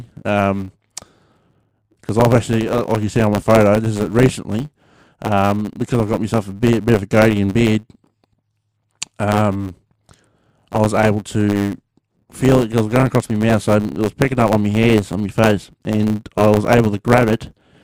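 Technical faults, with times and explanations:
Throughout, block size mismatch (truncated): a steady buzz at 100 Hz sits under the speech, and the whole clip runs about 1.07 times too fast while its timbre stays. One stage hands over longer blocks than the next stage takes in, so the tail of every block is dropped. Each cut leaves a small discontinuity, and their regular repetition makes the buzz. The rate fits blocks of 512 samples being clipped short.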